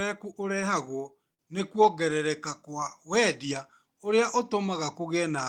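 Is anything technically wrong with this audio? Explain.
Yes. A short stall from a late packet at 1.34 to 1.42 s: the jitter buffer ran dry, so about 47 ms of held sound bridges the gap, nothing lost, with a slight buzz or dip.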